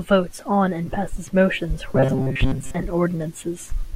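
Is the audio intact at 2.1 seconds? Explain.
No, at 2.1 s you're in the middle of robotic sound from repeated short buffers, running from 1.93 to 2.75 s. It's likely that audio arrived too late and roughly 7.5 ms chunks were looped to fill most of that stretch, giving a stiff, metallic 133 Hz buzz.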